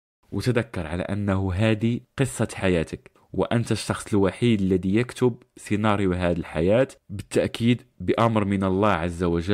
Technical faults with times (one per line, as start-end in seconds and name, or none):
none